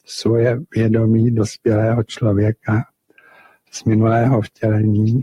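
From the start, a noise suppressor built for speech is working on this sound. It mistakes steady tones, ambience and decay for noise and keeps pulling them down. The gain moves by around 10 dB as it reacts. Onsets get through fairly intact. Sustained parts and tails sink beneath them. The result pumps and flutters. The body of the sound thins out, and the level never settles.

Between 3.09 and 3.73 s, the suppressor cuts one stretch of sound much harder than the rest. It treats that part as noise. The deepest drop is about 19 dB. Roughly half a second of that window is pulled down.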